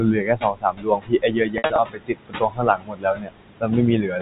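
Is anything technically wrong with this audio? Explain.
Yes. Three kinds of fault are audible.

Noise suppressor artifacts run through the whole clip. The suppressor pulls down whatever bands it judges to be steady noise, frame by frame, so the room noise, about 12 dB under the speech, sinks between the words and rises under them.

Speech cut by the noise suppressor affects 0.00 to 3.73 s, with drops of up to about 22 dB across roughly three seconds of it, and again from 4.02 s to the end, more mildly, at about 8 dB. In both stretches the suppressor mistook parts of the speech for noise and turned soft consonants and endings down with the background, so they sound swallowed. This differs from the general artifacts because the speech itself loses level, not just the background between words.

Packet loss with pitch repetition falls between 1.58 and 1.78 s. About 120 ms went missing in gaps scattered over 200 ms, the longest 60 ms. 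The receiver filled each gap by repeating the last pitch period, which gives a brief held, buzzy tone before the speech returns. A suppressor cut only makes the speech fainter, while this produces a brief synthetic buzz.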